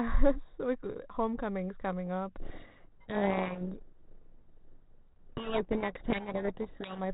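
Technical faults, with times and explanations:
Throughout, channel delay (comb filtering): one channel lags the other by roughly 0.2 ms, and summing to mono carves regular notches from around 3 kHz, giving a hollow, phasey tone.
2.40–7.04 s, codec payload misread: right after "like homecoming's coming up", the 32 kbit/s G.726 decoder reads its code words in the wrong bit order, burying the speech under harsh distortion.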